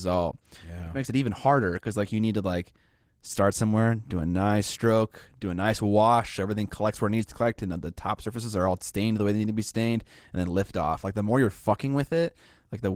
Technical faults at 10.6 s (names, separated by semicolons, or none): Opus voice compression